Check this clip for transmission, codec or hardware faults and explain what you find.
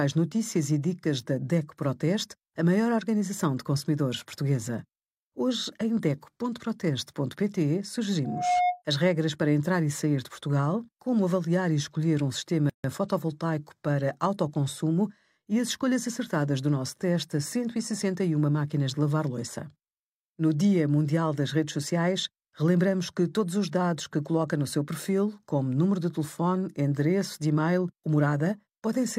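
Two faults turn up in this speech clip, one from the playback hardware and one from how the file was assembled.

From 8.24 to 8.82 s there is loudspeaker feedback squeal. A microphone picked up its own loudspeaker, and the loop gain at 717 Hz rose above one. That single tone swells over about a third of a second to roughly 5 dB above the speech, then stops just before "as regras para entrar".

From 12.70 to 12.84 s there is a gap at a join of encoded pieces. Two separately encoded sections were spliced without trimming encoder delay and end padding, leaving a 147 ms gap between "avaliar e escolher um" and "fotovoltaico para autoconsumo e". It has smeared edges, and the sentence resumes where it broke off.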